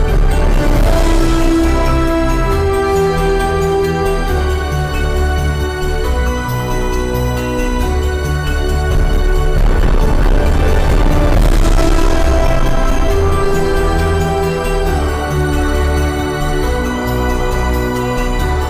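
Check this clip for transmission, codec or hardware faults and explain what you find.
One fault is present, and it runs through the whole clip: hard clipping. The signal is driven about 9 dB past the limit of some stage, so roughly a sixth of the samples hit the ceiling and are cut flat. Those squared-off peaks add a spray of high harmonics, heard as a harsh, gritty fuzz on every loud passage. Unlike soft saturation or a limiter, which round peaks off gently, this distortion is abrupt and bright.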